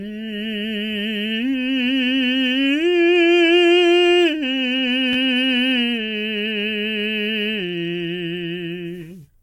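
Repeated buffer at 5.13 to 5.16 s and again at 7.90 to 7.93 s: fresh music data arrived late, so the same 11.6 ms slice, which fits a 512-sample buffer, replayed twice, then three times, giving brief buzzing stutters with hard joins and essentially nothing lost.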